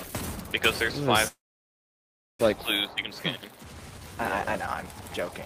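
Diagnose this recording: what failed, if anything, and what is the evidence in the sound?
At 1.27 s the sound stops moving forward. The last moment carries on briefly as a fading buzz, then drops to near silence for roughly 1.02 s. At 2.41 s the audio resumes exactly where it left off. Nothing is skipped, but about 1.12 s of filler has been inserted, so everything after it arrives later by that amount. This is a call audio freeze at the network stage, likely caused by packets held up in transit until the jitter buffer ran empty.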